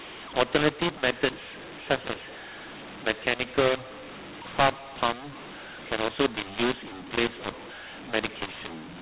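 A mu-law and A-law mix-up runs through this entire speech recording: telephone audio encoded as G.711 mu-law is being decoded as A-law, so sample levels are scrambled, making the speech harsh and distorted and filling pauses with noise, all within the 4 kHz telephone band.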